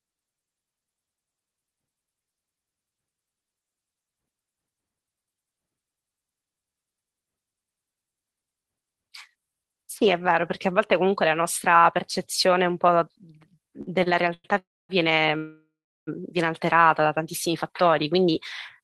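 Three short stalls from a late packet land at 13.81–13.89 s, 14.03–14.08 s and 14.34–14.46 s. Each time the jitter buffer ran dry and the last sound was stretched, by 57, 30 and 100 ms, with a faint buzz, then carried on with nothing skipped. The held sound never decays to silence, which sets these apart from a freeze.

Two call audio freezes follow, at 14.58–14.91 s and 15.37–16.09 s. The sound turns to a fading buzz, then drops to silence for about 240 ms and 370 ms. It resumes where it stopped, likely because packets were held up in transit, adding 310 and 700 ms of delay.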